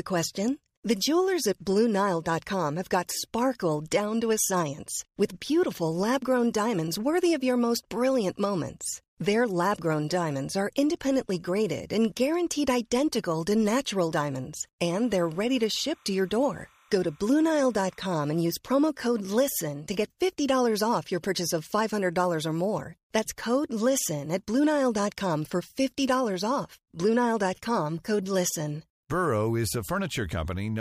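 Right after "identical to natural diamonds", from 14.88 to 18.41 s, there's timecode bleed: a faint chirpy warble flipping near 1 and 2 kHz, which fits 30-frame code leaking from a neighbouring line.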